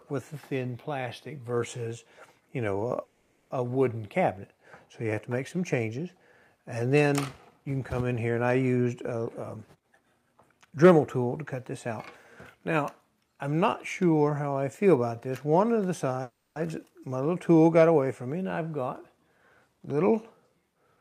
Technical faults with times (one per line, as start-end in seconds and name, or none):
3.03-3.52 call audio freeze
9.24-11.01 jitter buffer speed-up
16.22-16.58 call audio freeze
20.74-20.97 jitter buffer speed-up